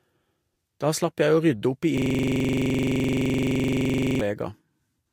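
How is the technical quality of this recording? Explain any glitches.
The recording has one major glitch, a system hang loop. From 1.98 to 4.21 s, after "å rydde opp i", a frozen system replays one 42.7 ms buffer 52 times. The result is a rough 23.4 Hz stutter.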